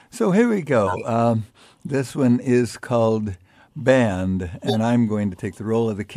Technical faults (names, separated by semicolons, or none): corrupt frame decoded